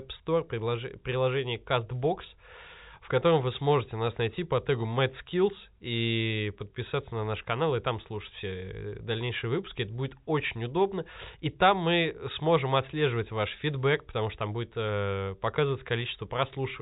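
No technical faults can be heard anywhere in this speech clip. It comes through G.711 telephone coding, A-law at 64 kbps, so nothing above about 3.8 kHz reaches the ear and the band has the narrow, boxy top of a landline call.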